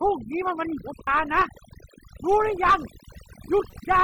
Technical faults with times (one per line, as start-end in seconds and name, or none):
0.00-4.04 overdone noise removal
1.07 damaged data in a compressed stream
3.70-3.74 damaged data in a compressed stream